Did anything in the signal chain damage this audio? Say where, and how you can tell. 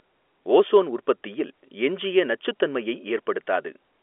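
No, nothing in the chain damaged this one; the audio simply carries the usual G.711 telephone coding of a phone line, so it sits in the 300 Hz to 3.4 kHz band with nothing above about 3.7 kHz, and that's the format working as intended.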